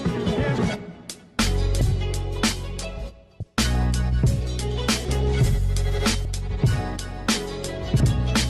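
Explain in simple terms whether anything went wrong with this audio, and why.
Yes, the audio suffers from compressed frames skipped. At 0.58, 1.81, 3.40, 5.04, 6.25 and 8.00 s, small blocks of the stored audio were never played, so the sound jumps forward, losing anywhere from a brief moment to about a third of a second. The gaps fit blocks of roughly 26 ms each. Unlike a dropout, there is no silence, and unlike a click, each join is a soft, smeared blip.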